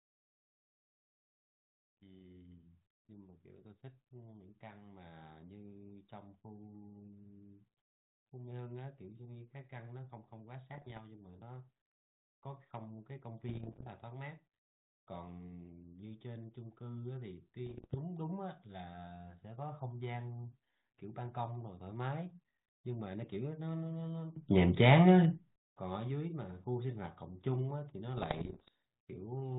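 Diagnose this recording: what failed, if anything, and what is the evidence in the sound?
Bit errors on an ADPCM link, in transmission: rough popping bursts at 10.74–10.99, 13.48–13.88, 17.66–17.95 and 28.17–28.68 s. Each flipped bit corrupts the decoder's step size and predictor, so the damage rings for milliseconds rather than clicking once.

Sudden gain jump, likely an unramped digital gain change in call processing: from 24.36 to 25.56 s everything rises about 15 dB, background noise included, which louder talking would not do.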